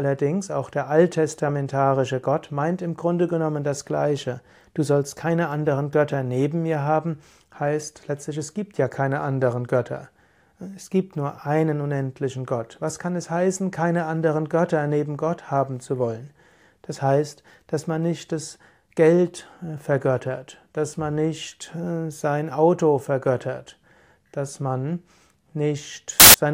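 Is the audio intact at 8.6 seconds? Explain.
Yes, at 8.6 seconds the audio plays through cleanly, with no dropout, click, distortion or other technical fault to be heard at that moment.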